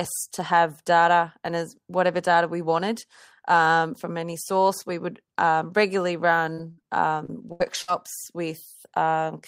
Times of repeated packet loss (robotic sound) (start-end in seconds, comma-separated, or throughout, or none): 6.53-7.98